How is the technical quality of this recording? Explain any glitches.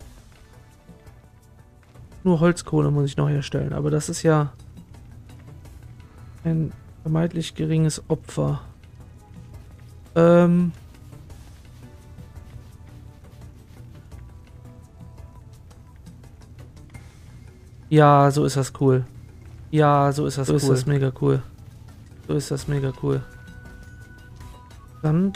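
There's one real problem, a doubled audio track in the last stretch. From 19.15 s to 24.53 s a second copy of the same audio sits about two seconds behind the original, roughly 5 dB quieter. It's full-band and dry, with no decay or room colour, so it sounds like a flat, detached repeat rather than an echo, and it cuts in and out abruptly at both ends. The likely cause is the signal being captured a second time through a slower path, or an edit holding two copies out of step.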